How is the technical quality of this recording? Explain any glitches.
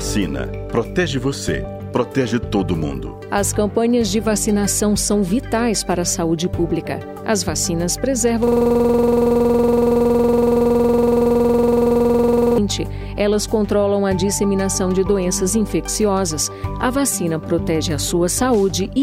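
One serious glitch: a system hang loop from 8.47 to 12.58 s. A 46.44 ms buffer, which fits a 2048-sample ring, repeats nearly 90 times, producing a rasping 21.5 Hz stutter.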